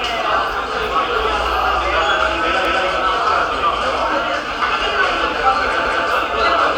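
At 2.65 s the audio stumbles as a 200 ms stretch plays a second time, and the same thing recurs at 5.85 s. This is overlapping chunks: the audio was handled in blocks of about 3 s, and each new block began 200 ms before the previous one ended, so that slice is duplicated at every join. It is heard as a brief stutter or click at the seam, at regular intervals.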